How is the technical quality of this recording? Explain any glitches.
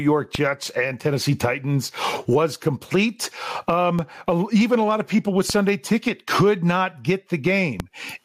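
The recording has two technical problems. The level pumps throughout, and four low thumps cut in along the way.

Gain pumping runs through the whole clip, with the gain swinging by about 25 dB. Loud and soft parts sound squashed together. The likely cause is gain set far too high, with a fast limiter clamping every peak.

DC steps occur at 0.35 s, 3.99 s (just before "even a lot of"), 5.50 s (just after "lot of people with") and 7.8 s. Each time, the waveform's zero line jumps suddenly. The offset then drains away through a 5 Hz high-pass. Each one is heard as a brief low thump while the speech carries on.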